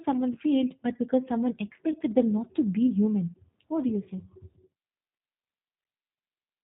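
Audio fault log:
throughout, G.729 codec: The speech has a slightly rough, synthetic edge and nothing above 4 kHz, which fits an 8 kbit/s G.729A coder. It rebuilds each 10 ms frame from a vocal tract filter, a pitch predictor and a few pulses, so the damage is plainly audible. Unlike a simple low-pass or a generic low bitrate, the roughness follows the voice itself, with a buzzy, pulse-built texture.
0.33–0.40 s, 1.92–1.97 s and 5.18–5.20 s, VoIP packet loss concealed by the speech codec: Each event fits a single lost 20 ms packet. The decoder fills the gap by stretching its last pitch and filter into a buzzy tone or coloured noise that fades. Because each frame builds on the previous one, the voice stays weak or smeared briefly after the packet returns. Unlike a plain dropout, there is no hard silence or click, only this smooth fill and slow recovery.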